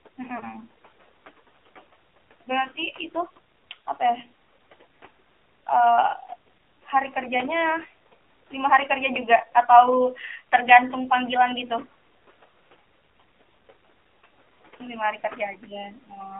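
From the start, the speech runs through the AMR narrowband mobile codec, the speech coder used in 2G and 3G calls. The band is confined to roughly 300 Hz to 3.4 kHz, so nothing above that survives, and the voice carries a plainly audible buzzy, synthetic edge. That grain suggests a low AMR-NB mode around 7.4 kbps. The codec rebuilds speech from a vocal-tract model excited by a few pulses, not from the waveform itself. That is why the damage sounds mechanical rather than merely dull. It is not simply band-limiting.

Noise suppressor artifacts are also present throughout. The room noise sits about 19 dB below the speech and can be heard beneath it. Between phrases, the suppressor pulls the noise down by about 17 dB, then lets it rise again under the speech. The suppressor works band by band, frame by frame. This pumping follows the speech on and off, so the noise itself does not stay constant.

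At 0.38 to 0.44 s comes a case of lost AMR speech frames. The damage is consistent with a single dropped 20 ms frame. The decoder filled the gap by reusing its last good pitch and vocal-tract settings at reduced gain. The result is a brief dip, and the voice comes back weak or rough for a moment as it recovers. This is short and local, unlike the steady codec grain, and there is no drawn-out fade to silence.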